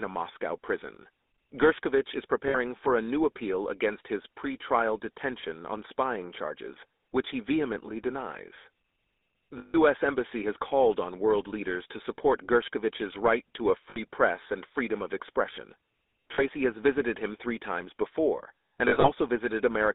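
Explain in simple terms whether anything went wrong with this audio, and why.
Yes. The whole recording went through the GSM full-rate codec, the old mobile-phone coder. It squeezes the sound into a narrow phone band of 250 Hz to 3.7 kHz and leaves a plainly buzzy, gravelly roughness.

There are also lost GSM frames. Each gap is patched by holding the last good sound, which makes a brief rough, metallic ring:

2.48 s, lasting about 60 ms, just before "for a new appeal"
9.58 s, about 160 ms, the longest
13.9 s, about 60 ms
16.34 s, about 40 ms, between "and freedom of expression" and "has visited him three"
18.88 s, after "three times before and", several short patches over about 0.16 s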